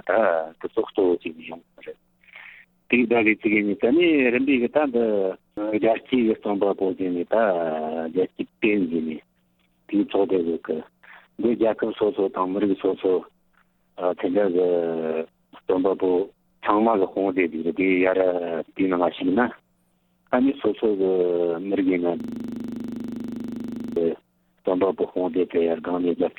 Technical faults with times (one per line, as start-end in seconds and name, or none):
22.20-23.96 system hang loop